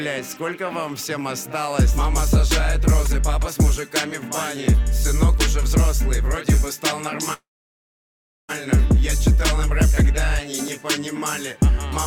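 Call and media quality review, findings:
Call audio freeze, 7.33–8.51 s: brief buzzy or hissy continuation of the last sound fading to about 1.05 s of silence, then playback resumes where it stopped, nothing lost, 1.15 s added delay. Likely jitter buffer underrun from held-up packets. Waveform: decaying tail into a flat line; spectrogram: smeared, fading bands, then a blank column.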